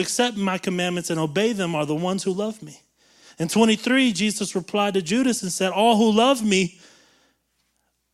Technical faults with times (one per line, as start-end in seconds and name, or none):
none